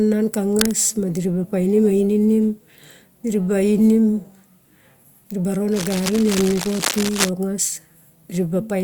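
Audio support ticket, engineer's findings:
Cable scratch noise at 0.52–0.74 s and 5.72–7.29 s. Dense, uneven scratching over the speech. First burst nearly as loud as the signal, second about 10 dB down. Likely a worn cable or connector moved, contact resistance fluctuating.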